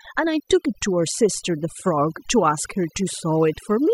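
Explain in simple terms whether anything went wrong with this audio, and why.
Something did go wrong, and it lasts the whole clip: overdone noise removal. A noise reduction tool was pushed too hard on a noisy recording. Whenever a narrow slice of frequencies came close to its idea of the noise, it turned that slice down almost to nothing, and the softer parts of the speech were cut along with the noise. As a result, the pauses sound nearly silent with small twinkling specks.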